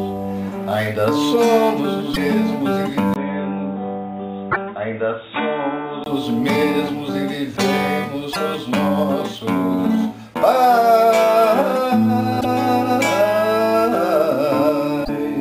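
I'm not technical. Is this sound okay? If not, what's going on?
No, it isn't quite right. At 2.10, 4.48, 8.30, 12.37 and 15.01 seconds there are short glitches, each under a tenth of a second. That's damaged data in a compressed stream: a bit of the file is corrupted, so the player stumbles, loses its place and skips ahead to the next readable chunk.

From 3.14 to 6.06 seconds the sound goes dull and muffled, with nothing above 3.8 kHz, a little quieter, and with some added background noise. It starts with a brief 20 ms gap. It's likely that the input switched to a poorer device, like a headset mic, before the original came back.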